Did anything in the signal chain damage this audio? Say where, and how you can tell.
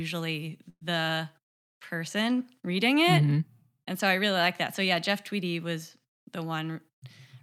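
Yes: a burst of packet loss on the network, 0.69 to 0.83 s. Concealment holds and fades the preceding sound, unlike a buffer dropout's abrupt silence, and about 120 ms is skipped.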